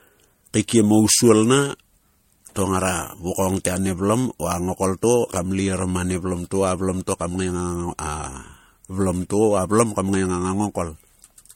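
Right through the speech there's a swirly, hollow smear, consonant attacks are blurred, and nothing comes through above 16.6 kHz. That's generation loss, likely from MP3 encoding repeated roughly four times at something like 64 kbit/s, each pass piling fresh quantisation noise and spectral holes onto the last.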